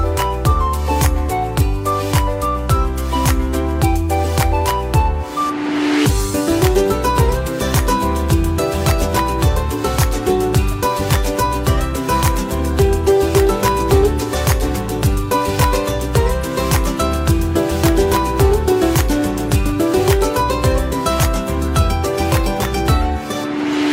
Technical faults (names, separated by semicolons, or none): none